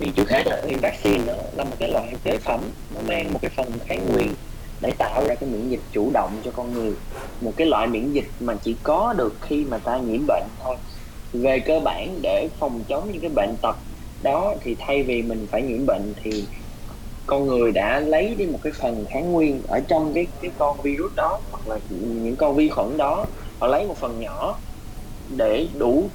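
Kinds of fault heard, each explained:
Block size mismatch (truncated): one stage writes longer blocks than the next reads, so the end of each block is discarded. From the start to 5.29 s this gives a 109 Hz buzz, with the audio running 1.16 times fast at near-normal pitch. This fits 512-sample written blocks.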